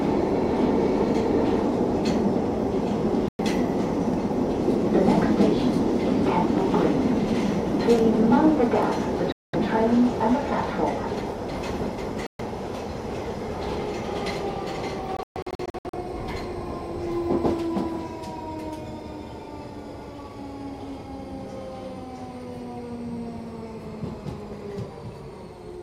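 Abrupt holes of silence hit the audio at 3.28 s, 9.32 s and 12.27 s, lasting 0.11, 0.21 and 0.13 s. A stuttering burst of gaps follows from 15.17 to 15.95 s. Each time the sound resumes further on, likely a Bluetooth dropout discarding late packets.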